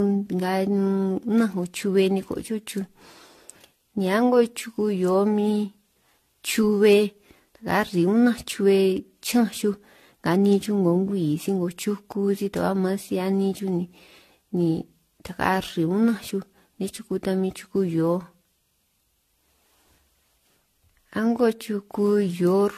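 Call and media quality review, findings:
Generation loss, whole clip. Speech is swirly, hollow and smeared, attacks blurred, nothing above 14 kHz. Likely repeated AAC-LC re-encoding, half a dozen or so passes, fits a 64 kbit/s chain. Each pass requantises on a shifted frame grid, so noise and spectral holes stack.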